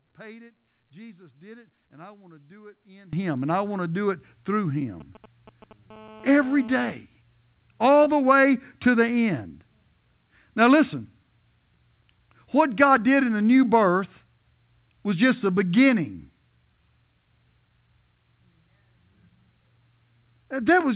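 From 0.0 to 3.13 s, up to "and I want to", the speech drops by about 23 dB to a faint residue, likely because one channel is inverted and cancels in a mono sum. The waveform shrinks sharply there.

From 5.00 to 5.73 s, just after "to do it through", GSM signalling bursts add a galloping run of short 217 Hz buzzes, well below the speech. A spectrogram shows clustered vertical striations.

From 5.90 to 6.92 s, a GSM phone buzz becomes continuous: a raspy 217 Hz tone about 24 dB below the speech, drawn as evenly spaced harmonic lines filling the 4 kHz call band.

From 8.04 to 8.08 s, just before "the way to the", short concealed packet loss leaves 20 ms missing, 19 ms of it replaced with a synthesised fill, heard as a brief smear. The spectrogram shows a smoothed, slightly blurred patch there.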